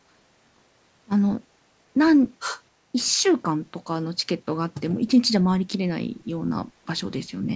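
From 2.39 to 2.62 s a second, fainter voice surfaces under the speech, roughly 10 dB down, most likely the other side's voice leaking through past an incomplete echo canceller.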